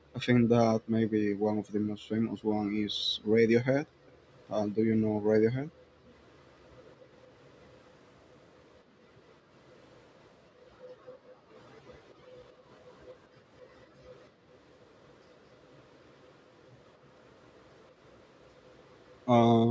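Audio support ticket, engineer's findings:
Background gated by the echo canceller: canceller clamping mic gain while far end plays. Room tone dips up to about 40 dB in 0.0–7.09 s (about 2 s of dips in total), 11.01–12.29 s and 13.28–14.48 s (about half a second each), then recovers on release.

Echo leak: far-end loudspeaker pickup not fully cancelled, likely at the far end. Faint copy of the speech 218 ms behind it at 4.07–4.72 s (about 40 dB down), 6.36–13.1 s (about 35 dB down) and 14.22–19.19 s (about 40 dB down). Call mic path band-limited to 8 kHz, as expected.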